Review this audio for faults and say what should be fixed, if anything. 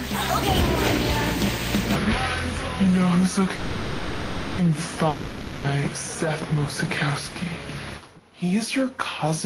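From 1.95 s to the end, playback was likely clocked at the wrong rate, a section at the wrong speed running at 0.72 times its recorded speed. Everything after that point drags and sits roughly five semitones low, with pitch and tempo falling together. Lock playback and any editing to the recording's true sample rate so speed stays correct.

From 3.55 to 4.60 s, a call audio freeze likely occurred when delayed packets let the jitter buffer run dry. The last sound is stretched into a fading buzz or hiss for 1.03 s, then the audio resumes where it stopped, so nothing is lost but everything after arrives about 1.03 s late. A deeper, adaptive jitter buffer and a steadier network path would keep this from recurring.

From 5.08 to 5.66 s, a long network dropout likely cut off incoming packets entirely. The receiver fills the hole with a decaying buzz or hiss, and when sound returns, 0.56 s of the original audio is simply gone. 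Redundancy or forward error correction on the link, plus a more reliable connection, would prevent the loss.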